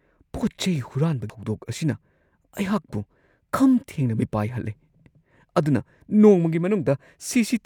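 Damaged data in a compressed stream at 1.30 to 1.33 s: corrupted bytes break the decoder's frame sync, producing a brief glitch in the speech as it resynchronises.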